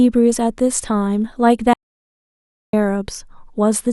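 At 1.73 s the speech cuts out mid-flow. An audio dropout to silence follows until 2.73 s, losing 1.0 s of sound. The gap is silent with no room tone. The input was likely lost while the recorder kept writing silence.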